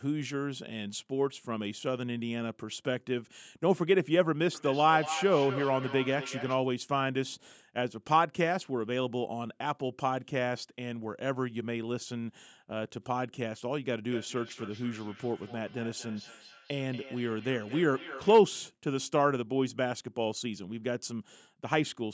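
Speech with feedback echo between two devices from 4.55 to 6.68 s (peaking about 9 dB below the voice) and 14.1 to 18.49 s (about 17 dB below): each word recurs at roughly a fifth-of-a-second interval, thinner and ringier each pass. Unlike room reverb's smooth decay, the repeats are discrete and evenly spaced.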